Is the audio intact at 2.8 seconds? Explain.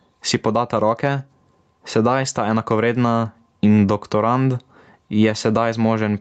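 No, not fully. At 2.8 seconds, as across the whole clip, the speech shows gain pumping. Gain that is likely set far too high is being pulled down by a fast limiter or compressor on each loud syllable, and then released, with a swing of roughly 15 dB. Unlike a dropout or a gate, the sound never vanishes. It breathes, loud and soft parts squeezed together. The call path limits the sound to 8 kHz.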